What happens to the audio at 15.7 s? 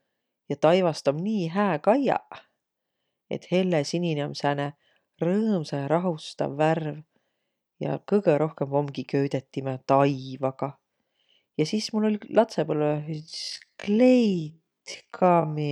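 By 15.7 s the clip is inside a time-stretched section running from 12.72 s to the end at 15.72 s. Software likely slowed this part to half speed while holding pitch by repeating short slices, so the speech drags.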